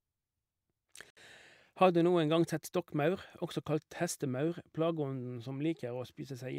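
At 1.10 s the speech drops out for about 65 ms, a hole with hard edges that ends at 1.17 s. It is a gap between stream segments: the time stamps of two segments, which fit 2-second segments, leave a space the player fills with silence.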